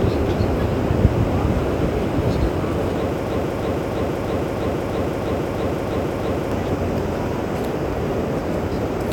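From 3.30 s to 6.52 s, the stream likely stalled and kept resending the last fragment it held, producing a broken-record loop: a 0.33 s piece of sound repeats exactly, back to back, ten times, and the audio that belonged in those 3.2 seconds is lost.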